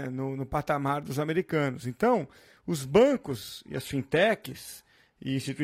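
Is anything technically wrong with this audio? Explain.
Yes. From 3.1 s to the end, the speech suddenly loses its clarity: the top end thins and turns swirly and synthetic, artefacts rise, and there's no gap at the switch. This is an adaptive stream at a lower bitrate. The player dropped to a leaner version of the stream mid-playback, which sounds like a move from a 96 kbit/s AAC-LC encoding to a 24 kbit/s HE-AAC one with its treble rebuilt rather than coded, and nothing survives above 14.9 kHz.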